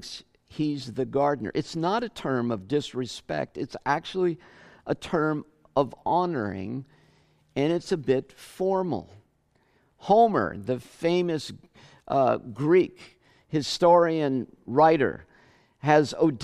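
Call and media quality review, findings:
No faults found in this speech.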